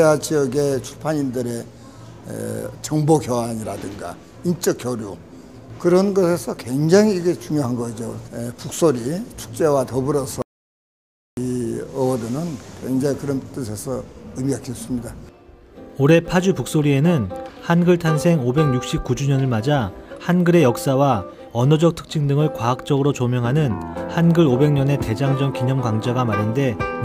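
At 10.42 s the sound stops dead and stays silent until 11.37 s: an audio dropout to silence lasting about 0.95 s. The input was likely lost for that stretch, through a dropped connection or an accidental mute, while recording carried on writing silence. There is no background hiss in the gap, and the sound resumes mid-flow. On a waveform this shows as a flat, near-silent line; on a spectrogram, as a fully blank vertical band.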